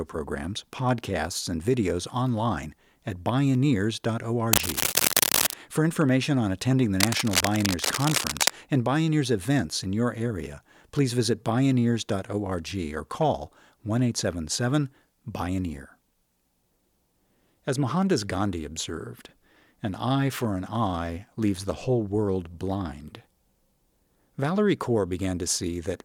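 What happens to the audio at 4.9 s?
Cable scratch noise runs from 4.53 to 5.55 s, likely from a worn cable or connector being moved so its contact resistance jumps rapidly. That puts dense, uneven bursts of scratchy rustling over the speech, roughly as loud as the speech itself.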